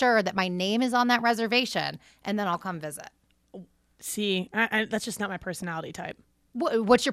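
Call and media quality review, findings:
DAB burbling at 0.37–0.39 s, 2.54 s and 5.58–5.63 s: short bursts of burbling over the speech. Probable component is the DAB receiver's MP2 decode under weak reception. Residual bit errors of around 0.1–0.15% get past error correction, corrupting samples so that individual sub-bands carry short blips of noise, across several frames per burst.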